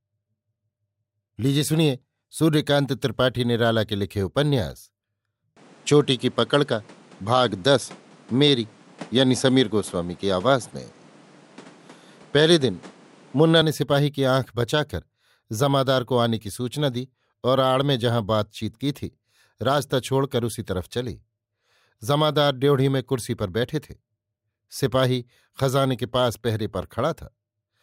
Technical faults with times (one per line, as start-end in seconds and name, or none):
5.57-13.62 input switched to a poorer device